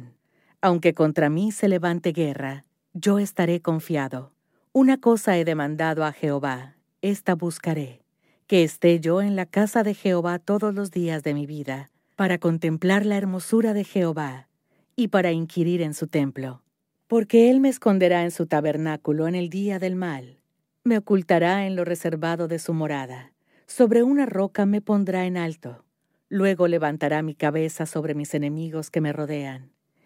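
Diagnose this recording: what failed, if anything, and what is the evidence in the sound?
Nothing failed; no faults heard.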